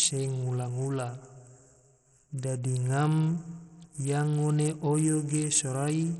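Right through the speech the treble flickers out under a gritty haze, likely heavy Bluetooth SBC compression near 64 kbps starving the upper sub-bands.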